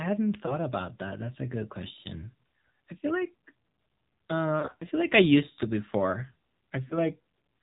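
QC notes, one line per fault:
Throughout: AMR narrowband mobile codec. The speech passes through AMR-NB at what sounds like about 7.4 kbps, with plainly audible damage. Nothing above 4 kHz survives, so the sound is muffled and thin. The low bitrate gives a buzzy, synthetic edge to the voice.
0.46–0.55 s: lost AMR speech frames. A single frame drops out just before "about that". The decoder repeats its last pitch and vocal tract settings at reduced gain. That fills the gap with a brief dip or warble.
4.60–4.84 s: lost AMR speech frames. Losses are scattered across about 200 ms before "feel like", the longest run about 40 ms. Each gap is patched from stale settings with falling gain. The sound wobbles and sags, then returns rough.
6.88–6.98 s: lost AMR speech frames. One frame is lost right after "used to before". Concealment repeats the previous frame's settings more quietly. A short dip or warble results before the signal recovers.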